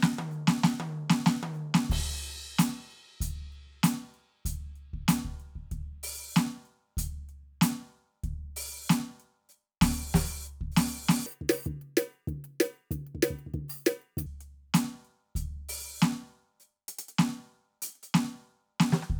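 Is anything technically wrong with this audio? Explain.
Yes. Audio read two samples at a time (double speed), 11.26 to 14.26 s: pairs of samples are taken as single frames, so the music plays twice as fast and an octave higher.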